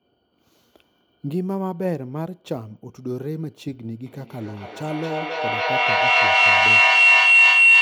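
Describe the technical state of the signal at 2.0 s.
At 2.0 s the speech signal is intact, with no audible dropout, distortion, glitch or other fault at that moment.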